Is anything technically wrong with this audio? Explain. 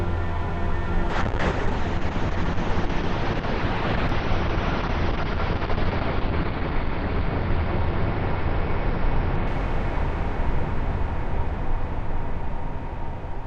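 Yes. A call bitrate drop runs from 1.11 to 10.53 s. The bandwidth estimate fell, and the encoder coded more coarsely, which fits a fall from about 96 to 7 kbps. The audio bandwidth shrinks from 20 kHz to 6 kHz, so the sound turns rough or muffled before clearing again.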